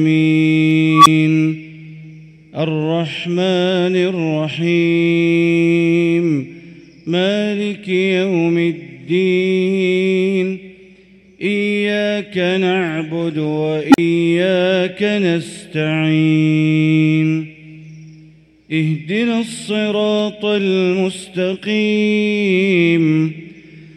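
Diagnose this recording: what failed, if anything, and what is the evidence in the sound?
Unstable filter at 0.93–1.07 s and 13.90–13.98 s, in the processing stage. A tone near 1 kHz swells over 130 ms, then one around 300 Hz over 40 ms. Each clips as the recursive filter's bad coefficients feed back, then overflows to silence (10 ms, 40 ms) until reset.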